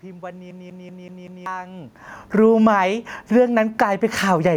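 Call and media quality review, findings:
Automatic gain falling, 2.23–4.52 s: speech and room noise sink together by about 6 dB. The AGC judged the input too loud and pulled gain down gradually.

Automatic gain rising, 2.73–4.32 s, overlapping the above: level swells back by about 7 dB, background included. The AGC found the input too quiet and raised gain. The earlier level shift near 1.5 s is only the talker moving.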